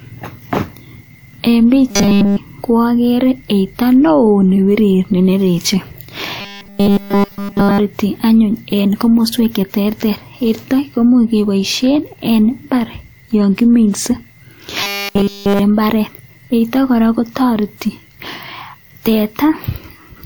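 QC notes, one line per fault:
1.91–2.38 s, 6.41–7.80 s and 14.83–15.59 s: robotic sound from repeated short buffers. The speech turns into a rigid, metallic 200 Hz buzz, likely from a 5 ms stretch being replayed while new audio arrives too late, so nearly all of the real signal is skipped. A spectrogram shows flat harmonics spaced at 200 Hz, and the waveform shows identical 5 ms cycles.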